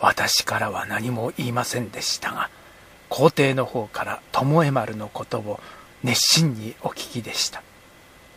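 Nothing in the recording stood out as a technical problem on listening.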